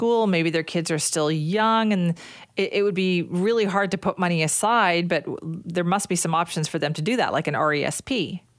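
Nothing technically wrong turns up anywhere in this short bit of speech.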